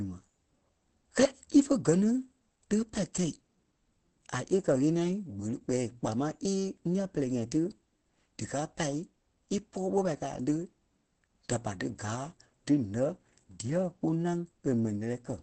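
Across the whole speech clip there is plainly audible damage, likely from Opus compression at a low rate that fits roughly 16 kbps. At this rate the encoder has switched to its SILK speech mode, which squeezes the signal into wideband and makes the voice sound muffled and hoarse. On a spectrogram the energy stops at a flat ceiling near 8.6 kHz for the full duration, with nothing above it.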